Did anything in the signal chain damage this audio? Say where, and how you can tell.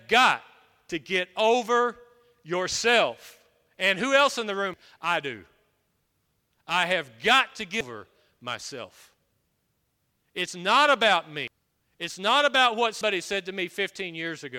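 Yes. Compressed frames skipped in decoding: speech jumps ahead at 4.74, 7.81, 11.48 and 13.01 s, losing whole frames.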